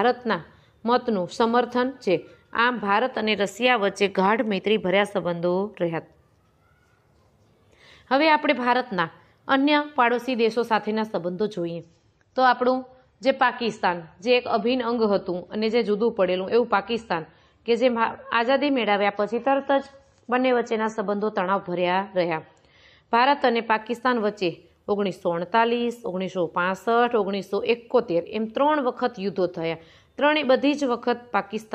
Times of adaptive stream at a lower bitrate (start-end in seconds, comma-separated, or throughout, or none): 11.73-23.73